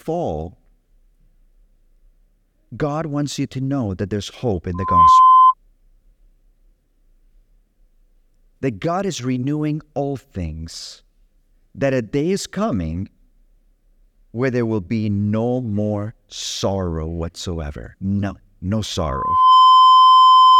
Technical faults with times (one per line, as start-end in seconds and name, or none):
4.74-5.54 loudspeaker feedback squeal
18.98-20.60 loudspeaker feedback squeal